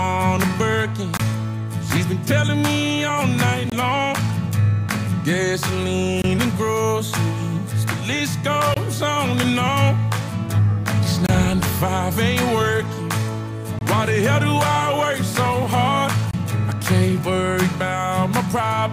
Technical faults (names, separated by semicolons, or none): gap between chunks